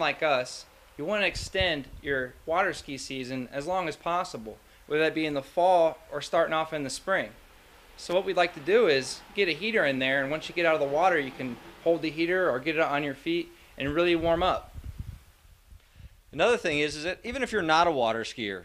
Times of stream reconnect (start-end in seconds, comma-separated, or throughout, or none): none